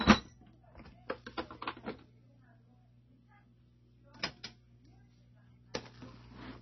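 Throughout, the sound is dull and watery: nothing reaches above 5.9 kHz, and the upper detail that remains swirls and flickers, with thin metallic chirps on bright, noisy moments. This is most likely heavy MP3 compression at a very low rate, which fits roughly 24 kbps. Starved of bits, the encoder chops off the treble at a fixed frequency and discards weak frequency lines, which then pop in and out from one frame to the next.

At 5.74 s a sharp attack arrives with a brief hiss just ahead of it, about 11 ms long, and the hit itself sounds blunted rather than crisp. This is pre-echo. The transform block containing the attack spreads its quantisation noise evenly across its whole length, so noise sized for the loud onset also lands in the quiet instant before it, where nothing masks it.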